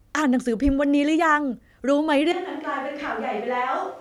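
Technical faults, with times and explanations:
2.32 s to end, switch to a distant microphone: the speech abruptly turns roomy, hollow and bass-light, about 5 dB quieter, likely because a farther microphone took over.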